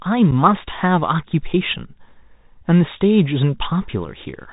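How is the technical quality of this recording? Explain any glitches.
Quality is poor: narrowband headset speech with two brief dropouts.

Bluetooth CVSD headset codec, throughout: one-bit delta coding, consistent with a 64 kbps CVSD link, cuts everything above 4 kHz, roughens sibilants and leaves granular hiss.

Unconcealed Bluetooth headset packet loss at 0.31 s and 4.05 s: about one packet each time, leaving 7.5 ms holes with abrupt edges that can click and a momentarily quieter return.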